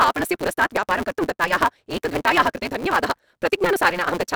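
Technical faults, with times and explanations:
Throughout, block size mismatch (truncated): block ends are dropped, causing a 172 Hz buzz that fits 256-sample reads, and speech running 1.88 times fast at near-normal pitch.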